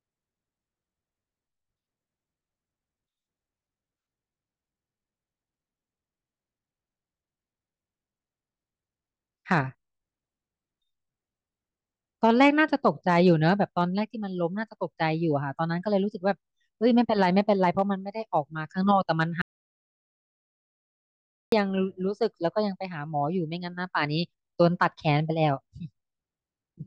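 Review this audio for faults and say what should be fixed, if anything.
Audio dropout to silence from 19.42 to 21.52 s: the speech cuts off mid-flow and returns about 2.1 s later. The waveform is a flat line, and the spectrogram shows a blank gap with no room tone. The likely cause is a lost input while recording continued. Secure the input connections and monitor levels live so that a lost signal is noticed and the passage re-recorded.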